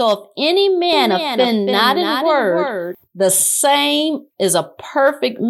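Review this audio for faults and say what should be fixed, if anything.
A doubled audio track runs from 0.93 to 2.95 s: a full-band copy trails about 300 ms behind, around 5 dB quieter, likely from a second, slower capture path. Unlike echo, it has no decay or room colour and cuts in and out abruptly. Fix it by routing the source through a single capture path and muting duplicate monitoring or loopback feeds.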